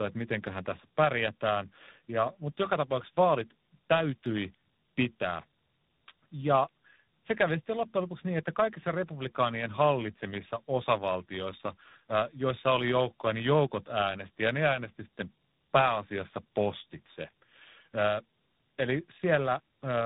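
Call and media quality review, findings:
Tandem speech coding throughout: rough, muffled, warbly speech, nothing above 3.9 kHz. Sounds like three speech codecs in a row, each re-encoding the previous decoder's already degraded output at network borders.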